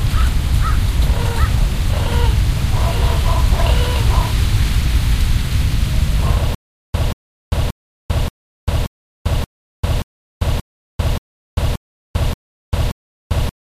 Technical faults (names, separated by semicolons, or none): stutter with silent gaps